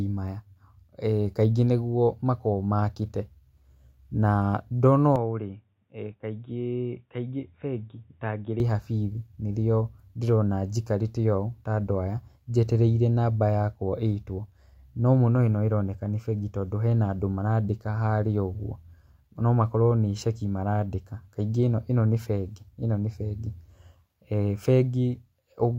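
A speech recording in which, from 5.16 s to 8.6 s, the sound abruptly turns dull and boxy, loses everything above 3.8 kHz, drops by about 5 dB, and picks up a faint new noise floor roughly 50 dB down, with no gap at either transition. The likely cause is an input switched to a poorer device, such as a headset in call mode, whose narrower band and different level and noise replace the original microphone until it switches back.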